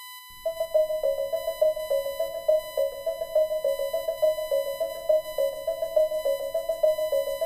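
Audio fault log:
throughout, USB whine: a steady, fixed-pitch 1 kHz tone sits roughly 15 dB below the sound, as current drawn in 1 ms USB frames leaks through power or ground. On a spectrogram it is a thin, unbroken horizontal line at 1 kHz.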